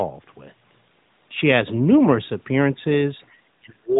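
The speech dips briefly by about 5 dB at 2.72 to 2.77 s and 3.18 to 3.24 s, then falls away by about 35 dB from 3.59 s to the end. This is speech suppressed in double talk, likely an echo canceller unable to separate this side's talk from the far side's loudspeaker echo and turning both down.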